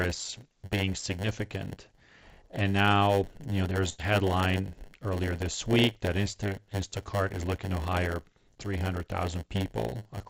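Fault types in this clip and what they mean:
Block size mismatch (padded): Each block ends in zero padding, causing a 100 Hz buzz and about 8% slower playback at normal pitch; waveform shows regular gaps, spectrogram 100 Hz harmonic lines.
Burst of packet loss: After "now you know there's", about 80 ms is lost and concealed by a fading extension; the spectrogram shows a smeared, decaying patch before "headline earlier this week".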